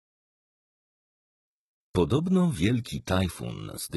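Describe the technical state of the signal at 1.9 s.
At 1.9 s the signal is inside a stretch of adaptive stream at a lower bitrate, which runs from 1.47 s to the end. The player dropped abruptly, with no gap, to a much leaner encoding, consistent with HE-AAC at around 16 kbit/s. The treble thins, with swirly codec artefacts. On a spectrogram, energy stops sharply at about 11.8 kHz from 1.47 s onward, a hard horizontal ceiling. The waveform shows no dropout.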